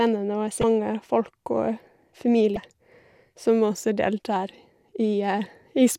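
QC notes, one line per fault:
0.60–0.64 s and 2.54–2.57 s: damaged data in a compressed stream. A short chirp, squawk, click or hole in each span as the decoder misreads corrupted frames and loses sync.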